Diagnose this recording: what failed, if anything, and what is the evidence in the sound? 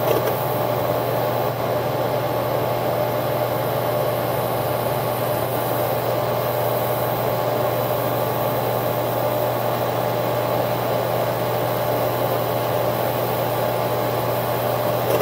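At the radio reception stage, the hybrid receiver lost its digital signal and showed digital radio blending to analogue, cross-faded over about 0.1 s to the FM broadcast from 1.49 to 5.55 s. The sound drops about 1 dB and gains faint hiss, roughly 40 dB below it.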